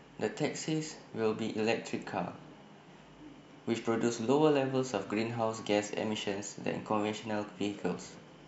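Nothing in this speech recording stood out as a technical problem on listening.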